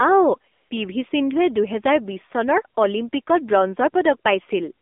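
A short speech clip that's been through an AMR narrowband mobile codec the whole way, and the codec damage is plainly audible: the band runs only from about 250 Hz to 3.6 kHz, with nothing above, and the voice has that buzzy, synthetic edge that fits a low mode of around 7.4 kbps. There's also a patch of AMR comfort noise from 0.52 to 0.70 s, about 180 ms where the phone stopped sending speech and the receiver filled the gap with smooth, steady synthetic hiss that switches in and out.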